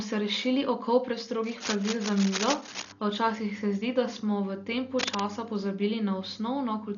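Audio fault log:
Throughout: Dolby Digital compression. Speech is dull, with nothing above 6.9 kHz and rough, fluttering noise around tones. This is heavy damage, likely from a low bitrate near 40 kbps.
1.43–2.92 s and 4.99–5.20 s: cable scratch noise. Dense, uneven scratching bursts nearly as loud as the speech, likely from a worn cable or connector being moved.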